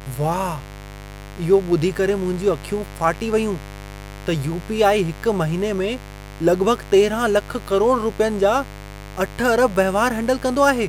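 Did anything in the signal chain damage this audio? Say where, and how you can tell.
Yes. A steady, raspy mains buzz sits under the speech for the whole clip, from start to finish, fairly prominent at roughly 15 dB below the speech. The damage is in the analogue wiring. Its fundamental is 50 Hz, with a dense stack of harmonics climbing into the kilohertz range, which is what gives it the edge. That spectrum comes from sharp switching spikes, twice per mains cycle, leaking in through a dimmer, a rectifier or a missing shield.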